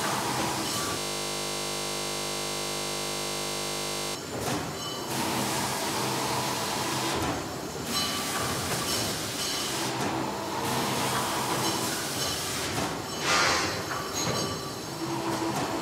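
From 0.99 s to 4.15 s the everyday sound gives way to a steady buzz at 50 Hz, a flat mechanical drone with no movement in it. This is a system hang loop: the computer or its audio driver froze, while the sound hardware kept replaying the same 20 ms stretch of its ring buffer, more than 150 times in a row. Because the looped piece is so short, the repeats fuse into a tone at the loop rate instead of a stutter.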